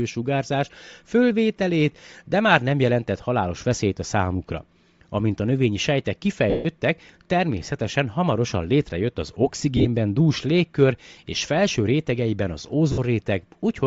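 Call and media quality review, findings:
Breathy, grainy upper band on speech throughout, plainly audible. Likely Bluetooth LC3 compression; sparse high spectrum refilled with noise, consistent with a low bitrate around 32 kbps and 10 ms frames.

Lost LE Audio frames at 6.50–6.66 s (150 ms smear fading out), 9.77–9.87 s (scattered, runs up to about 40 ms), 12.92–12.99 s (60 ms). Decoder repeating last spectrum with random signs, then fading.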